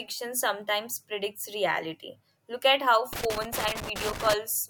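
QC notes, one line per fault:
3.13–4.34 s, loose connector crackle: just after "at how", an irregular burst of scratchy crackle as a worn contact makes and breaks, chopping the signal.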